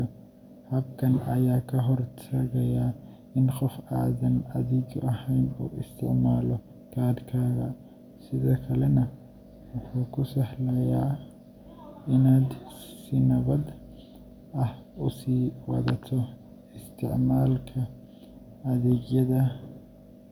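Nothing goes wrong anywhere in this speech recording, so there's no technical fault to walk through.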